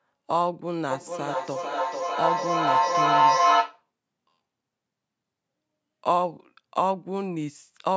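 Speech with feedback echo between two devices from 0.91 to 3.85 s: the sound returns roughly every 0.4 s and, peaking at about 5 dB above the speech itself, the repeats pile up rather than fade. A second device in the room is replaying this microphone's signal back into it, beyond the reach of the local echo canceller. The waveform shows stacked, evenly spaced copies, and the spectrogram shows repeating bands that grow thinner and ringier, all below 8 kHz.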